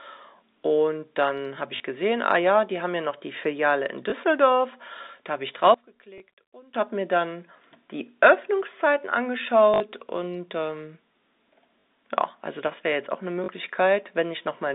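At 1.76 s a 40 ms stretch of the speech is replaced by packet loss with the last packet repeated. The receiver replays the final good chunk until fresh audio arrives, so the held fragment buzzes with a brief robotic stutter rather than dropping to silence. Further repeats follow at 4.1 s (20 ms), 6.18 s (20 ms), 9.74 s (60 ms), 11.81 s (40 ms) and 13.44 s (40 ms). These lengths fit 20 ms packets.

From 5.74 s to 6.74 s the speech suddenly falls by about 22 dB and turns faint, then returns at full level. The likely cause is one channel inverted. With one stereo side's polarity reversed, the centred voice cancels in a mono sum and only a faint difference signal is left. The repeat at 6.18 s falls inside this span.

All of this sits within the narrow 250 Hz to 3.7 kHz telephone band of the G.711 coding.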